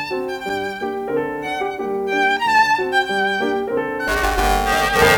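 From 4.08 s to the end of the music, a robotic buzz at 345 Hz rides on the signal: buffer tearing. Writer and hardware pointers have slipped, so roughly half of each period, which fits a 128-sample buffer, replays audio about 10 ms old, hard-joined on both sides.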